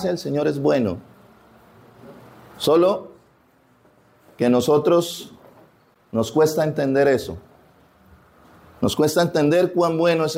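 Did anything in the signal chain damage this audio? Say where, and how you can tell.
No, nothing in the chain left an audible mark on this audio. None of the stages from capture to playback shows any damage.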